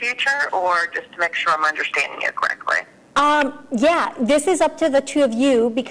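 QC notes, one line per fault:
No faults found.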